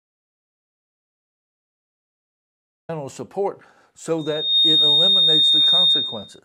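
Right from the top, the speech is already gone in an audio dropout to silence that runs until 2.89 s. It's plain silence with no room tone, so the input was most likely lost upstream while the recorder kept writing. Whatever was said there is simply missing.

Then at 4.18 s a loudspeaker feedback squeal kicks in: the mic is picking up its own speaker, and a single tone at 3.7 kHz runs away, swelling over under half a second to sit roughly 10 dB above the speech until 6.39 s.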